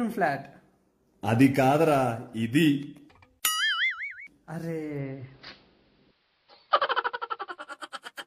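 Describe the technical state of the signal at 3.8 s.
Nothing at 3.8 s points to a technical fault; the signal there is intact.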